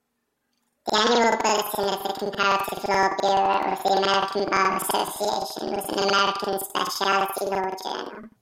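Planar audio read as interleaved runs through this whole speech clip. Each block stores all of the left channel and then all of the right, but playback treats it as alternating left-right pairs, so every block is heard twice at double speed. The blocks last about 85.33 ms, which fits a 4096-sample block, so the speech sits a full octave (12 semitones) too high and flutters at about 11.7 Hz, the rate at which the blocks repeat.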